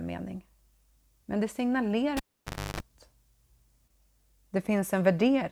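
Speech with a cable pulled and plugged in at 2.17 to 2.80 s: a pop, about 0.58 s of near silence that includes a 50 Hz buzz for about 0.31 s, then a second pop, unlike a dropout's clean gap.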